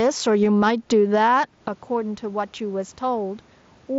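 Gain pumping runs through the whole speech clip. The gain is pulled down on each loud syllable, swinging by around 10 dB. Steady compression would not do this. The swinging points to a fast limiter likely fighting gain that was set too high.

At 0.45 s there is a concealed Bluetooth headset packet loss, heard as a barely noticeable blip. One gap of about 7.5 ms, a single headset frame, was filled by repeating the waveform just heard. Because only one frame was lost, it lacks the held buzzy tone that a run of losses produces.

At 1.68 s a sudden gain jump drops everything by about 12 dB, and the level stays down to the end. Speech and room noise fall together in one step with no fade. That sets it apart from the pumping, which keeps rising and recovering. An unramped digital gain change is the likely cause.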